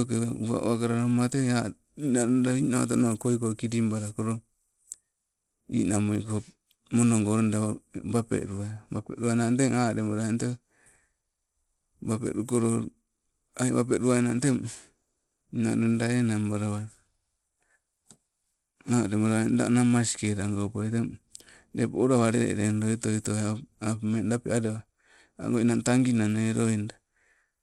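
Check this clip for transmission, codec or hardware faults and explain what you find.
The speech carries one fault, present for the whole clip. Content stops at 16.8 kHz, the remaining treble flickers, and a gritty, aliased grain rides on it. The likely cause is Bluetooth SBC compression at a starved bit pool, consistent with about 96 kbps, leaving top sub-bands unfunded and the rest coarsely quantised.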